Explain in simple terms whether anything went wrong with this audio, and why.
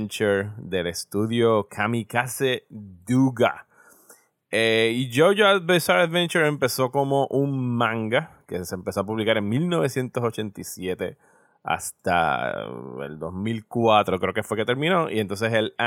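Nothing went wrong with this speech recording. At no point does anything happen to the sound that points to a technical fault.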